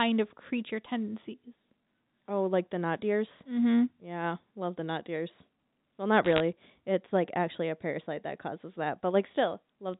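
From 6.25 to 6.40 s, a short burst of sharp ticks and crackle sits over the speech, the signature of bit errors on a digital phone line. Over that stretch a few tenths of a percent of the bits arrived flipped, so individual samples in the G.711 stream jump to wrong values. On the waveform these show as isolated single-sample spikes, and on a spectrogram as thin vertical lines running up to the 4 kHz ceiling of the telephone band.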